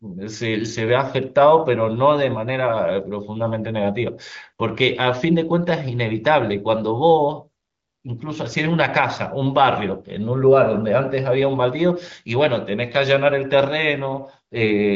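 Nothing goes wrong anywhere in this speech recording; it comes through the AMR wideband (HD Voice) codec at 18.25 kbit/s, so the top end simply tapers off around 7.5 kHz, the way that path normally sounds.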